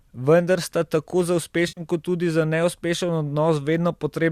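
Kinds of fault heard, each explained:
AAC frame loss with concealment: From about 1.68 to 1.81 s the speech turns briefly smeared and noisy, a hollow blur instead of a clean gap. Roughly 90 ms of audio is missing, which fits a run of about nine short frames dropped from what is likely a low-delay AAC stream. The decoder bridged the hole by rebuilding sound from the last good spectrum, so the patch has a plausible but grainy texture rather than silence.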